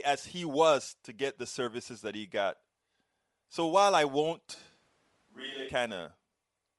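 Speech carries a breathy, grainy edge throughout, likely from Bluetooth LC3 compression. The spectrogram shows patchy, noise-filled upper bands, which fits about 48 kbps in 7.5 ms frames. From 4.56 to 5.67 s the sound turns hollow and roomy, with thinner bass, likely from a switch to a distant microphone. The waveform steps down by about 10 dB, and the spectrogram shows a raised room-noise floor.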